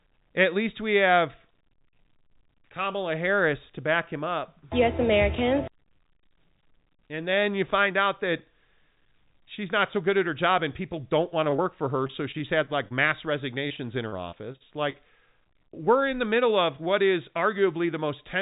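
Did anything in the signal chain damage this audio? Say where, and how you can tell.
Yes. On the network side, repeated packet loss makes the speech robotic from 11.3 to 11.64 s after "her job and people", then from 12.07 to 12.95 s and 13.68 to 14.96 s. Gaps up to 43 ms get patched by stretching the last sound.

The jitter buffer speed-up starts at 17.42 s, right after "middle of what is", and runs to 17.99 s. The receiver trims roughly 40 ms of pitch periods, so it plays about 6% faster at the same pitch.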